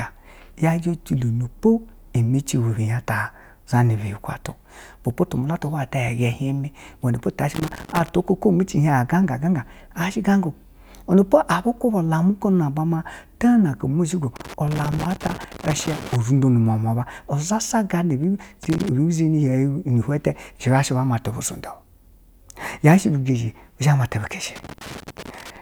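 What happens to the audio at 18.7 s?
Right after "sha gana" there's a burst of loose connector crackle, from about 18.63 to 18.89 s. A worn or dirty contact is making and breaking as it shifts, chopping the signal on and off, so you get that short, irregular scratchy crackle over the speech.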